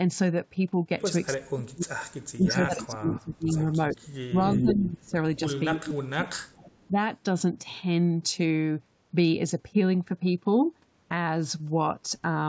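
From 1.33 to 5.16 s the speech dips and breaks up in pieces, falling by around 35 dB at its deepest across about two seconds in total. This is likely speech suppressed in double talk: with both sides talking, the echo canceller turned down the near talker along with the echo. Overlapping this, from 2.48 to 7.12 s, a copy of the voice returns 364 ms late at only about 5 dB below the speech. This is likely an echo leak, where the canceller on the loudspeaker side let residual echo through. The same suppression, likely from double talk again, recurs from 5.74 to 6.97 s, dropping roughly 30 dB over about a second. Throughout, the band stops at 8 kHz, which fits a G.722 call path.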